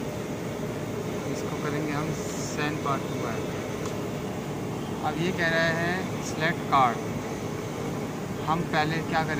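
Nothing here stands out as a technical fault; the audio runs along without any dropout, glitch or other problem worth pointing to.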